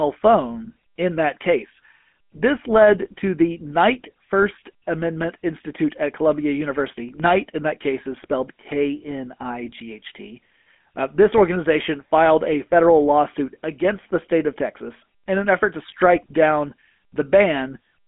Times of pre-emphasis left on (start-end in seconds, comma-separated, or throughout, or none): none